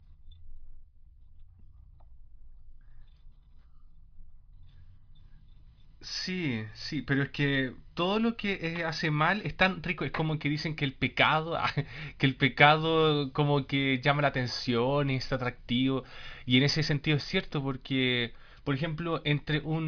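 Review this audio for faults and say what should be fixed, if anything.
No faults turn up in the audio, so nothing needs to be fixed.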